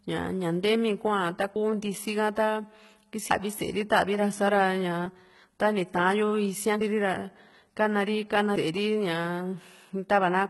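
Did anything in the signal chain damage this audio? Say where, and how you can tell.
Yes. At the codec stage, the whole clip carries heavy HE-AAC compression damage, likely at a low bitrate around 16 kbps. The treble is synthesised by band replication rather than coded, so sibilants sound gritty and metallic, with upper harmonics that fail to line up with the lower spectrum.

At the buffer stage, there is audio missing between chunks at 3.31 s: roughly a third of a second vanishes and the two sides butt together without silence. This is likely a loss at a chunk handover, which fits 2-second processing chunks.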